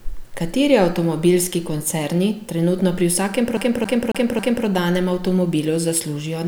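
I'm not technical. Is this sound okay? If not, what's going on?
No. CD stuck on one turn, from 3.57 to 4.66 s: the speech repeats the same 0.27 s snippet four times, with a brief silence at each jump. A scratch keeps throwing the player's laser back one track, so it replays that spot.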